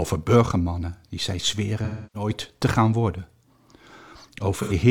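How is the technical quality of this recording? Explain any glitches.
The recording has two dropouts from AAC frame loss with concealment, at 1.84–2.29 s and 4.62–4.73 s. Encoded frames never reached the decoder, so it patched each gap by reusing the last good spectrum with randomised phase or interpolated energy. That leaves a smeared, noisy, phasey stretch in place of the real sound. The first gap, roughly 0.3 s of lost audio, fits about seven frames. The second, about 85 ms, fits two.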